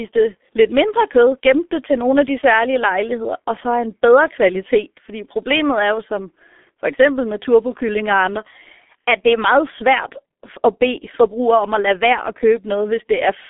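Muffled, hoarse speech with smeared consonants runs throughout, the mark of the G.723.1 codec. Its heavy coding at low bitrate leaves nothing above roughly 3.7 kHz.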